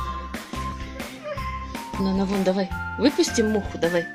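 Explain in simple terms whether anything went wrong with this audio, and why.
Something did go wrong, right at 0.72 s. The sound suddenly jumps forward, skipping about a tenth of a second. That's compressed frames skipped: a few chunks of the compressed audio, each 32 ms long here, were never played, either because they were missing or because the decoder threw them out as damaged.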